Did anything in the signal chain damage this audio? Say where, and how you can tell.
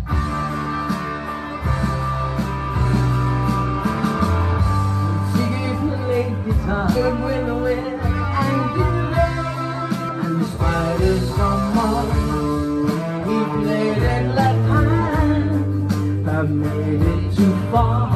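Yes, there's damaged data in a compressed stream at the codec stage. Around 10.08 s you get a brief blip, gone in a couple of hundredths of a second. Corrupted bytes there make the decoder misread frames, lose sync and hunt for the next clean frame header.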